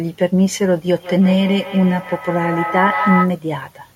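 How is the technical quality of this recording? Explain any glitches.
The recording has a clear fault. From 0.92 to 3.41 s, feedback echo between two devices makes the speech return roughly every 150 ms, thin and ringing, peaking about 4 dB below the speech itself. A second device in the room replays the call and the first device's microphone picks it up again, where its echo canceller does not remove it, since it only cancels its own device's playback.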